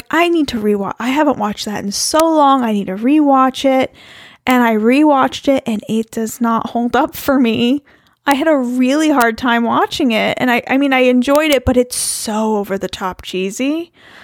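Speech with integer overflow: loud peaks wrap to the opposite sign and snap as harsh cracks at 2.20, 4.51 (before "I rewatched it and"), 8.31, 9.21 and 11.36–11.53 s.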